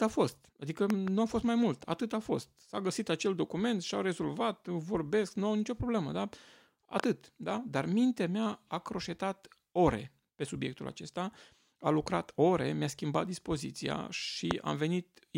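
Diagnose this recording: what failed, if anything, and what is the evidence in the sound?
Loud pops, likely a wiring or switch transient: double thumps at 0.90–1.10 s before "a fost mai mult" and 7.00–7.06 s, then one at 14.51–14.53 s after "schimbat dispoziția", about 15–20 dB over the speech.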